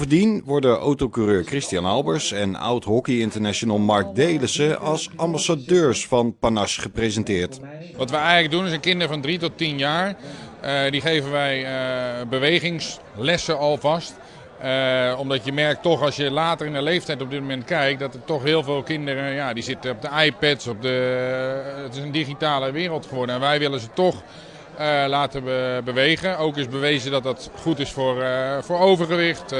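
There's clock drift between sender and receiver all the way through this audio: the sender's clock runs about 3% slow, so the receiver's jitter buffer keeps draining and it has to keep stretching things out to avoid running dry. You hear that as repeated timing corrections from 0.08 s to 29.55 s, with small repeated slices at uneven spacing, always in the same direction. Playback effectively sits at 97% speed and the corrections add roughly a second overall, which comes across as faint hiccups and a slightly dragging, unsteady tempo.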